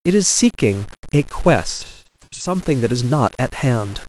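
Throughout, the speech carries grainy distortion that tracks the signal, around 25 dB below it. This is likely low bit depth without dither, fitting 6-bit rounding.

From 1.71 to 2.55 s, AAC frame loss with concealment smears the sound into noisy patches. About 0.47 s is lost in gaps, the longest near 0.2 s, fading and returning.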